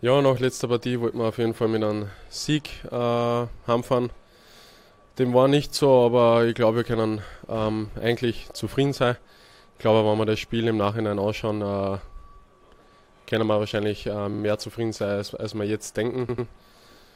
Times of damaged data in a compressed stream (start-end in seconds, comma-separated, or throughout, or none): none